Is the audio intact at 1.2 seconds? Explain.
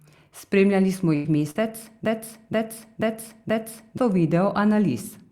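No, not at 1.2 s. That moment sits inside a burst of packet loss running from about 1.15 to 1.28 s. Several packets in a row never made it in time, so the receiver kept stretching the last bit of speech for about 91 ms and let it fade. You hear a held buzz or fading hiss rather than real speech, and when things pick up again roughly 100 ms of the original has been skipped over entirely.

Near the tail of that stretch, from about 1.25 to 1.27 s, there's also a lost packet rebuilt from error correction. The next packet carried a low-bitrate backup copy of this 20 ms frame, and the decoder played that in place of the original, so nothing drops out there. It just sounds rougher and a bit noisier than the speech around it.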